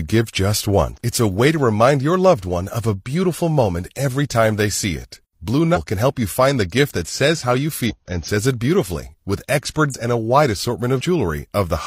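Compressed frames skipped in this speech clip: missing or rejected frames of roughly 46 ms each drop chunks of speech, causing brief jumps at 0.93 s (after "give just"), 5.72 s (before "can help you find"), 7.85 s, 9.90 s (after "says it beautifully with") and 10.96 s.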